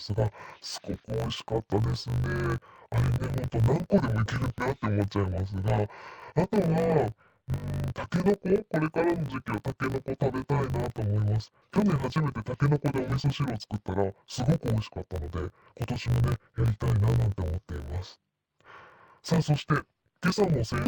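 Throughout, interleaved audio read as planar splits each 20 ms block into halves played together at half speed, dropping the speech an octave and adding a 50 Hz buzz.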